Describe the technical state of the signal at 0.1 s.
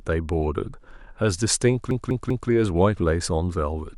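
At 0.1 s the speech signal is intact, with no audible fault at that moment.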